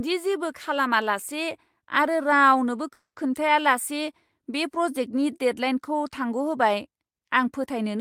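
At 2.93 to 3.32 s a call audio freeze: the sound smears into a fading buzz then about 110 ms of silence, likely from delayed packets emptying the jitter buffer. Speech resumes intact, 230 ms late.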